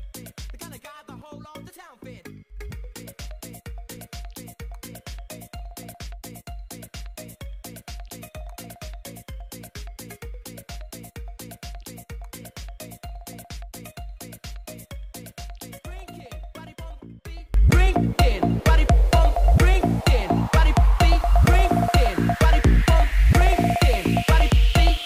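For the first 17.54 seconds the audio is sunk way down, about 20 dB below where it sits afterwards, and what's left sounds like leftover residue rather than the full sound. That's the signature of one channel inverted: the likely cause is a stereo source with one side's polarity flipped, so when it was folded to mono the shared content cancelled and only the difference between the two sides got through, until it comes back normally at 17.54 seconds.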